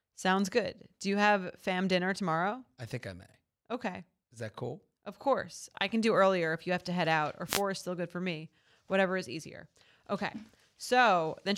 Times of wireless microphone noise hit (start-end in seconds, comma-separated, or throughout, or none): 7.46-7.62